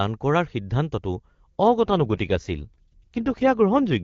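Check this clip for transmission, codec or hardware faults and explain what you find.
There's one fault, an AMR rate drop, running from about 1.68 s to the end. Before it the HD Voice codec sounds clean, consistent with the top 23.85 kbit/s mode. Then the speech abruptly turns rougher and more synthetic, with no gap and no loss of bandwidth. That points to the network pushing AMR-WB down to around 8.85 kbit/s and spending the freed bits on error protection for a weak radio link. The rate never recovers in this clip.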